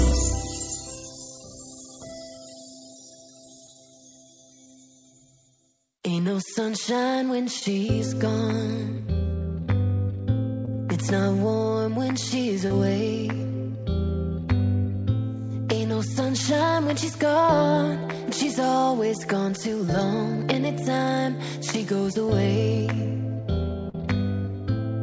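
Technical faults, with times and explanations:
3.67, 7.60–7.62, 10.65–10.68, 12.67–12.71, 20.00 and 23.89–23.95 s, short concealed packet loss: each gap, about 5 to 43 ms, was bridged by extending the preceding sound before blending back, giving a brief smear or wobble. Unlike an unconcealed dropout, there is no silent hole or hard click.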